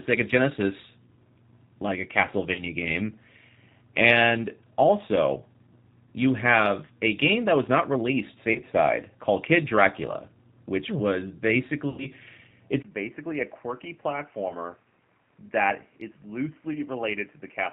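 G.729 codec coding runs through the whole speech clip. The 8 kbit/s coder rebuilds each 10 ms frame from a filter, pitch and a few pulses, cutting everything above 4 kHz and leaving the speech audibly rough and synthetic.

VoIP packet loss concealed by the speech codec occurs at 2.52–2.61 s, after "like a" (40 ms lost). The decoder extrapolates its last frame into a fading buzzy tone or coloured noise, and the speech stays weak briefly afterwards. It recurs at 8.53–8.62 s after "that was not released" (20 ms lost), and at 11.90–12.08 s after "which hmm was" (80 ms lost), the longest and most smeared.

At 12.82 s the input switched to a poorer device, likely a changed microphone or headset profile. A 20 ms gap is followed by duller sound with nothing above 3.1 kHz, a level about 10 dB lower, and new background noise roughly 35 dB down.

Further concealed packet losses of 20 ms each follow at 14.48–14.53 s and 16.73–16.78 s, each a short smear.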